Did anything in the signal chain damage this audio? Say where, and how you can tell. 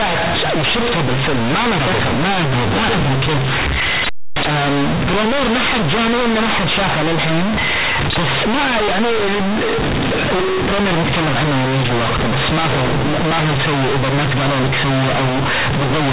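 Yes. The damage is at the sample-format conversion stage: companded audio read as linear. The speech was A-law coded, but the bytes are being played as plain linear 8-bit samples with no expansion, for the whole clip. Every sign change throws the output across roughly half its range, so quiet passages come out as loud as peaks. The result is harsh, buzzy distortion and heavy noise filling the pauses, all riding on an otherwise telephone-band A-law signal.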